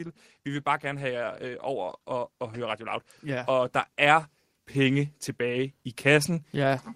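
From 0.44 s to the end of the clip, the level climbs steadily: automatic gain rising. The gain control judged the input too quiet and kept raising its gain, so the speech and the background noise swell together rather than settling at a fixed level.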